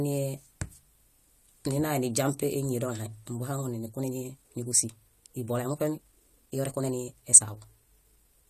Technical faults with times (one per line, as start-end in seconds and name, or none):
3.85-8.49 time-stretched section